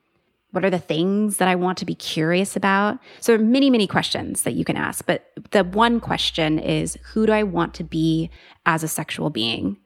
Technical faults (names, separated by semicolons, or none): mains hum